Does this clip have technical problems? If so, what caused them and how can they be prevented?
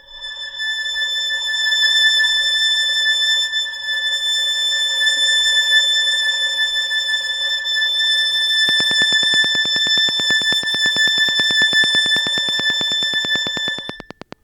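Yes. A train of clicks runs from 8.69 s to 14.34 s. The likely cause is electrical interference from nearby equipment, or a faulty connection or power supply, injecting a short pulse at a steady rate of about 9.2 per second. The result is roughly fifty evenly spaced clicks of much the same shape, peaking around 10 dB above the surrounding sound. They are heard as a regular ticking laid over everything in that stretch, gaps included. To prevent it, keep noisy equipment and cables away from the recording chain and check connections and the power supply.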